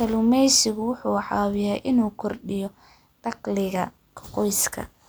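No technical faults are audible anywhere in the speech.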